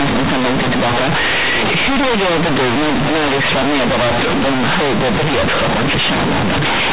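From start to finish the speech is hit by companded audio read as linear: A-law telephone bytes are played as plain 8-bit samples without expansion. Each sign change swings the output across about half its range, so quiet passages match loud ones, giving harsh, buzzy distortion and heavy noise in pauses, all within the 4 kHz telephone band.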